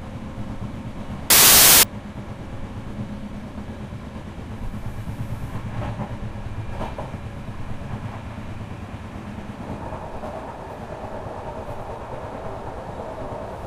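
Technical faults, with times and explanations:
1.30 to 1.83 s: samples built from the wrong bytes. The sample bytes are misassembled, so fast-changing low bits dominate, giving a burst of loud, harsh broadband noise.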